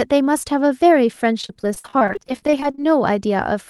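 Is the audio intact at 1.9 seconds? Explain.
No. At 1.9 s the speech sits inside a stretch of repeated packet loss (robotic sound) running from 1.41 to 2.86 s. Frequent dropouts of up to 52 ms are each patched by extending the previous sound, so about a third of that span is filler, heard as choppy speech with pieces missing.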